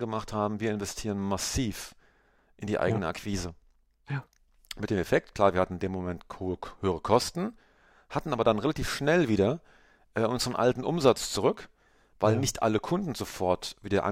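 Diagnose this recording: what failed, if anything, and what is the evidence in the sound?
Nothing failed; no faults heard.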